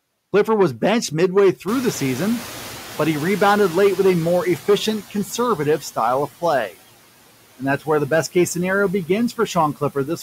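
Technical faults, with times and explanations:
Throughout, hard clipping: the speech was driven about 7 dB past what a stage in the chain could pass, so a few percent of samples have their peaks sheared flat. Those flat tops throw harmonics high up the spectrum, heard as crackle on the peaks.
Throughout, noise suppressor artifacts: a suppressor is pulling steady background noise down by about 16 dB, band by band and frame by frame. The noise sinks in the gaps and swells beneath the speech.
1.67 to 4.96 s, noise suppressor catching up: the room noise jumps by about 20 dB near 1.5 s, and the suppressor's noise estimate trails behind. At first the noise is cut by only about 9 dB, then it sinks gradually as the estimate adapts over roughly 3.3 s.
9.29 to 9.56 s, speech cut by the noise suppressor: the suppressor misreads part of the speech as noise and turns it down with the background, by up to about 13 dB over roughly a tenth of a second in total. 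Those sounds come across swallowed and faint.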